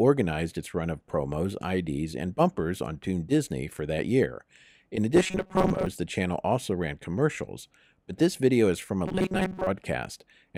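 From 5.16 to 5.86 s and again from 9.08 to 9.67 s, the sound goes robotic with a rigid 188 Hz buzz. It's likely repeated short buffers, about 5.3 ms long, filling gaps: roughly half the material is replaced in the first stretch and most of it in the second.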